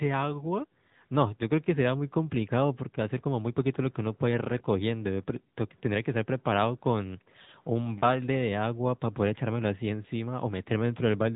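AMR narrowband mobile codec damage runs through the whole of this speech clip, from start to finish. The audio has been squeezed through the mobile speech coder at a rate that fits roughly 10.2 kbps, so the voice is rebuilt from a vocal-tract model excited by sparse pulses rather than carried as a waveform. The result sounds plainly buzzy and synthetic, and nothing survives above about 3.8 kHz, leaving the sound dull and telephone-like.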